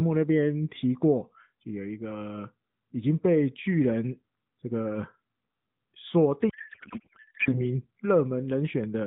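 From 6.50 to 7.61 s the speech gives way to a garbled, warbling noise that barely tracks it: a codec payload misread. The decoder is unpacking AMR frames with the fields shifted, which fits octet-aligned packing being read as bandwidth-efficient. Unlike packet loss, there are no gaps or concealment fades. Valid-looking frames keep arriving, just decoded as nonsense, and the sound snaps back once packing agrees. The surrounding narrowband audio fits AMR-NB at 12.2 kbps.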